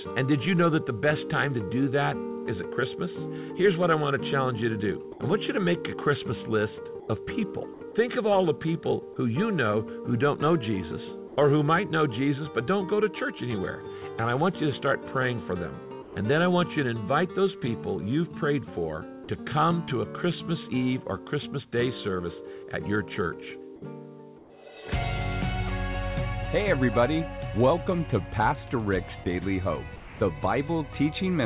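At 5.12 to 5.20 s and 7.00 to 7.08 s the sound briefly gives way to a flat hiss and then returns, most likely a sound dropped by the voice detector, which misjudged faint material as background and stopped sending while comfort noise filled in. Each is a single gap, unlike the chopping that follows. At 7.74 to 7.94 s the sound flickers on and off with synthetic hiss between the fragments, likely sound chopped by the voice detector switching repeatedly within one stretch. At 11.28 to 11.36 s, in a pause where the background sits about 19 dB below the loud parts, the real ambience turns into a smooth, featureless hiss about 2 dB quieter, likely comfort noise in place of the background. No foreground sound is lost, which separates it from a dropout. Further single gaps of the same kind occur at 16.02 to 16.16 s, 29.24 to 29.26 s and 29.96 to 30.20 s, each likely the voice detector dropping sound, with hiss briefly replacing the audio. 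At 24.38 to 24.50 s the background, about 27 dB below the loud parts, is likely swapped for comfort noise again, about 2 dB lower and without its natural texture. Throughout, the G.711 A-law call path limits everything to below 4 kHz.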